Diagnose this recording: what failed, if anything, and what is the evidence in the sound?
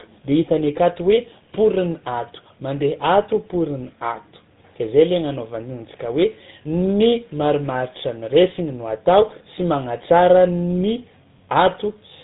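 Tandem speech coding at the codec stage affects the whole clip. The speech is rough, muffled and warbly, with nothing above 3.8 kHz. The roughness seems to compound, beyond what any single speech coder would produce, which points to a GSM full-rate coder re-encoding audio already degraded by an earlier ADPCM coding.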